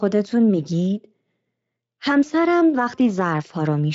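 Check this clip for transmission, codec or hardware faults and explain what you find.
No faults can be heard in this speech.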